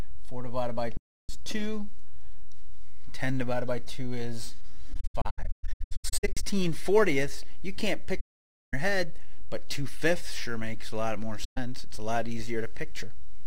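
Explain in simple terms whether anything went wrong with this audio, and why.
The sound drops into soft-edged silence four times: from 0.97 to 1.30 s, in a scattered run of short gaps from 4.93 to 6.44 s (the longest around 150 ms), from 8.20 to 8.74 s, and briefly from 11.44 to 11.58 s. These are AAC frame loss with muting. Chunks of the compressed stream went missing, and the decoder filled them with nothing, fading out and back in smoothly.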